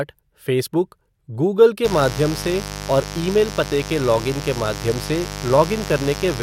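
A speech recording picks up a mains buzz at 1.85 s, right after "फ़ेसबुक गूगल", lasting to the end. It is fairly loud, roughly 10 dB below the speech. Unlike a smooth 50 Hz hum, it rasps, because switching spikes spread harmonics of 50 Hz up into the kilohertz range.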